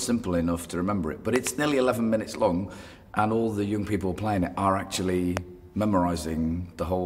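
At 1.36 s a loud pop arrives as two sharp clicks in quick succession, over by 1.49 s, and a single loud pop follows at 5.37 to 5.39 s. Both stand around 20 dB above the surrounding audio, which continues unbroken beneath them. The likely cause is an electrical transient, such as a connector being disturbed, a switch or a static discharge, injecting a brief voltage spike that the downstream circuitry shapes into a thump.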